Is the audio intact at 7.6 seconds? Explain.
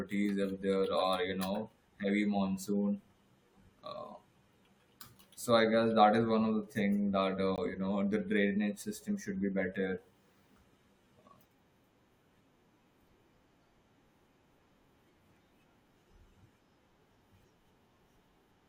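No. A gap between stream segments appears at 7.56 s: the timestamps of two adjoining segments, which point to 4-second segments, leave a gap of about 19 ms. The player fills it with silence, so the speech stops abruptly, with hard edges, though none is lost.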